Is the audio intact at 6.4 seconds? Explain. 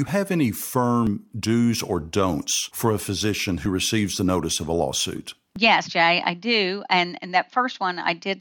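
Yes, at 6.4 seconds the speech is intact, with no dropout, click, distortion or other fault at that point.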